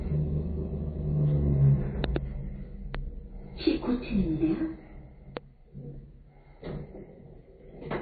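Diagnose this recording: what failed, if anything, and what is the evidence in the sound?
Codec stage: a watery, swirly texture throughout and a flat spectrogram ceiling at 4.6 kHz point to likely MP3 compression near 24 kbps.

Loud pops at 2.04–2.18 s (a double, about 20 dB up), 2.95 s and 5.37 s appear as sharp waveform spikes and vertical spectrogram lines, likely wiring or driver transients.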